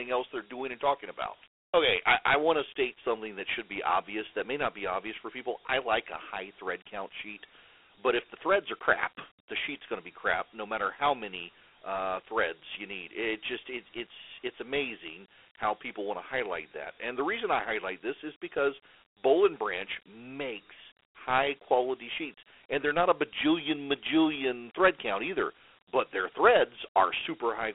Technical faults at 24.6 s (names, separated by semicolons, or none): Dialogic VOX ADPCM